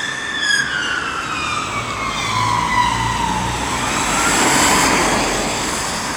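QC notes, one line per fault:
1.66 s to 6.16 s, sample clock jitter: from 1.66 s to the end, a fine hiss and grainy roughness rides on the sound and tracks its level. It grows on loud passages and bright, fast-changing content, and drops away in the quiet gaps. The conversion clock is wandering by something in the region of a couple of microseconds, so each sample lands slightly off time. The error scales with waveform slope and sits roughly 30 dB below the signal.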